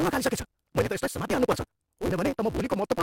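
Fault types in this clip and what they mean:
Block size mismatch (truncated): throughout, block ends are discarded, fitting a 256-sample read, giving a 188 Hz buzz and speech 1.88 times faster.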